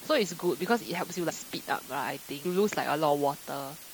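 A constant, even hiss sits under the speech from start to finish, at about 15 dB below the signal, with no grit or distortion riding on the voice. This is low bit depth with dither: the audio is carried at just 6 bits, and dither added before rounding turns the coarse rounding error into steady white noise. That is why it sounds like uniform hiss rather than harsh quantisation distortion.

At 1.29 s the speech jumps ahead, and around 100 ms of sound is missing. At 2.44 s a larger jump of roughly 200 ms follows. These are compressed frames skipped: whole blocks of coded audio were never played, and the jump sizes fit frames of about 21.3 ms.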